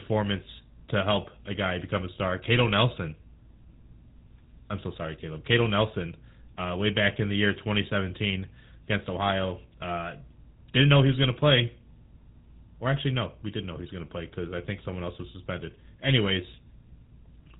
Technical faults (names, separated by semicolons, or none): GSM full-rate codec